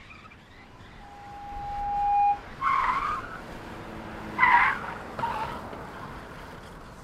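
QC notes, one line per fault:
0.99–2.46 s, loudspeaker feedback squeal: the microphone-to-speaker loop exceeds unity gain at 815 Hz, so a pure tone swells over about a second to roughly 10 dB above the sound.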